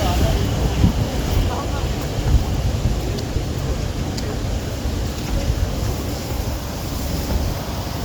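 At 1.27 s and again at 3.34 s the sound briefly turns into a short, grainy smear, where clear tonal content becomes noisy for about 15 ms before the signal returns. These are lost LE Audio frames. Over the Bluetooth LE Audio link, a small burst of data went missing each time, which fits a couple of frames. The LC3 decoder covered each gap by repeating the last spectrum it had with randomised signs, which produces that noisy blur in place of the real sound.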